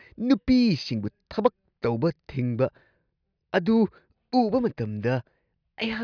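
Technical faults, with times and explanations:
No technical faults are audible anywhere in the speech.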